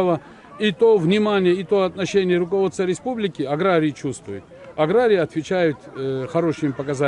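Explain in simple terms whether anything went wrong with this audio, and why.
Nothing went wrong here: the audio just carries on without any interruption, glitch or sudden change that would hint at a problem in the chain.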